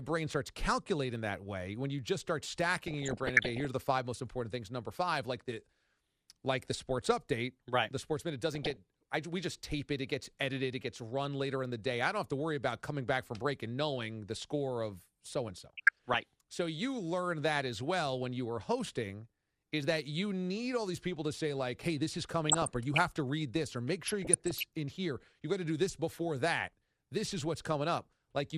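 Throughout, the speech sounds dull and gurgling, likely from MP2 compression at a low rate, which fits roughly 80 kbit/s. Upper sub-bands switch off and flicker, so a spectrogram shows a ragged ceiling with blocky, patchy high-frequency energy.

DAB burbling appears at 2.77–3.65 s, 8.51–8.77 s, 15.55–16.16 s, 22.46–23.00 s and 24.08–24.63 s. Bit errors that slipped past error correction corrupted sub-band data, producing short blips of noise in single sub-bands. A spectrogram shows isolated frequency bands flashing bright for single frames.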